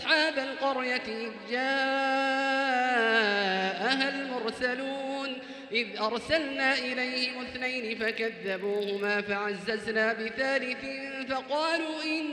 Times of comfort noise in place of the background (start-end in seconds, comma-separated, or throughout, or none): none